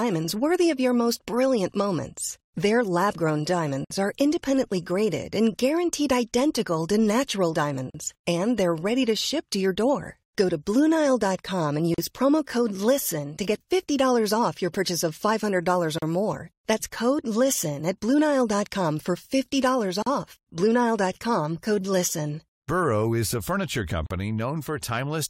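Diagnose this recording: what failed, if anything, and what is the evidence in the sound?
Encoding and joining stage: gaps at the joins of encoded pieces, spaced every 4 s, at 3.85 (58 ms), 7.90 after "guaranteed identical to natural", 11.94, 15.98 before "or more", 20.02 and 24.06 after "is a furniture" (40 ms each). Each piece was encoded separately, and its encoder start-up delay and last-frame padding were left in, so silence opens at each join. Unlike network dropouts, the gaps fall at a strict period and the speech resumes exactly where it stopped, with nothing lost.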